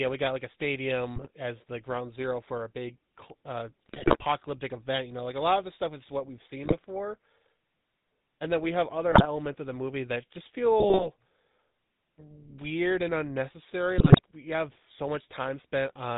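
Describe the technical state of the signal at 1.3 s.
At 1.3 s the speech has just come out of a burst of squawks and gargling between 1.16 and 1.29 s: GSM bit errors corrupting the decoder's filter, pitch and gain values across several frames. Underneath, the voice keeps a buzzy, gravelly roughness with nothing above 4 kHz. That is plainly audible GSM full-rate codec damage, consistent with the 13 kbps coder's pulse-driven excitation.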